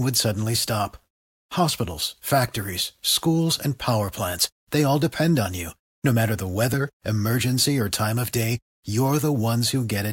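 At 5.10 s and 6.73 s the speech jumps, each skip losing roughly 10 ms, likely a dropped buffer (overrun); waveforms show abrupt discontinuities, spectrograms thin vertical broadband lines.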